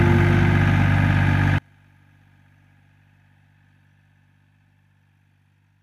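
From 1.58 s to the end, the sound collapses. Its level falls by about 35 dB, leaving a faint residue. The likely cause is one channel inverted. One stereo side has reversed polarity, so shared content cancels when both sides are summed to mono.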